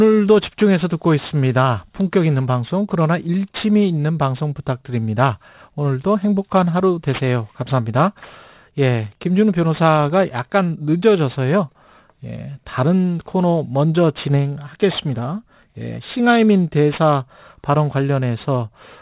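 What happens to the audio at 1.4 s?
At 1.4 s the speech has a gritty, metallic edge on its sibilants, with the spectrum running hard up to a ceiling near 4 kHz. This is aliasing, present throughout the clip rather than only at this moment. The sample rate was lowered without filtering first, which fits a drop to 8 kHz, so energy above 4 kHz folds back as false, unrelated tones sitting roughly 25 dB below the speech.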